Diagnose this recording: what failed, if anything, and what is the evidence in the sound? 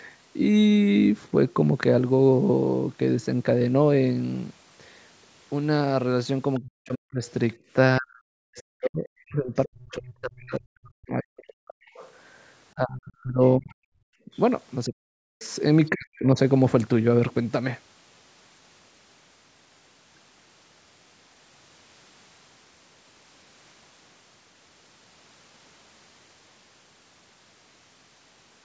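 Other side's voice leaking through at 6.55, 8.13–8.87, 11.94–12.12, 13.47–14.4 and 15.41–15.5 s, faint scraps about 25 to 35 dB down; likely residual loudspeaker echo the call canceller missed.

Speech suppressed in double talk from 6.6 to 16.37 s, dipping as much as 40 dB over roughly seven seconds; likely the canceller muting its own talker during overlap.

Background gated by the echo canceller at 7.57–7.7 s: room sound drops about 16 dB for roughly 150 ms as the call processing clamps the microphone.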